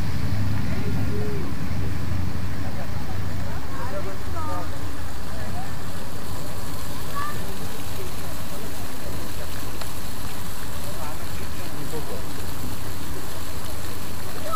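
No faults detected at any point in the recording.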